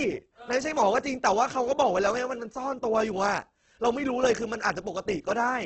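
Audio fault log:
throughout, Opus compression. The speech sounds rough and grainy for the whole clip. The top end stops at 8.4 kHz, with nothing above it. The damage is heavy. Voiced tones turn noisy rather than swirly, and there are few spectral holes. This is likely Opus in its music (CELT) mode. That mode keeps each band's energy and fills starved bands with folded or noise-like content. The grain and the narrowed band point to a very low bitrate, around 12 kbps, with wideband coding.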